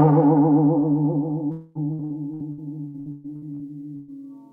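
From 1.51 to 1.78 s the music gives way to a fading smeared buzz, likely a long network dropout; the spectrogram shows frozen, decaying harmonics where detail should be. Between 1.93 and 4.11 s, repeated packet loss makes the sound choppy and robotic: ten patched holes, the longest 123 ms, covering a third of the span, appear as repeating blocky smears.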